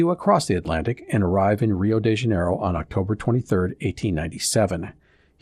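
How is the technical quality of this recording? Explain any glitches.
The recording has audible damage throughout. From start to finish the speech sounds dull and carries a gurgling, granular roughness, most likely from MP2 compression at a low bitrate, which fits a rate around 80 kbps. Layer II divides the signal into 32 sub-bands and, short of bits, drops upper bands and quantises the rest coarsely, so the top end flickers in and out. A plain low-pass filter would sound muffled but smooth, with none of this flickering grain.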